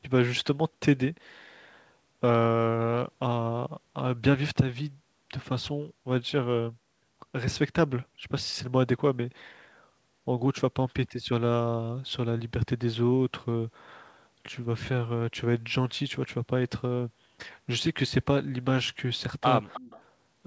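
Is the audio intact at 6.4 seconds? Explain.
Yes, the audio is intact at 6.4 seconds, with no dropout, glitch or other fault at that moment.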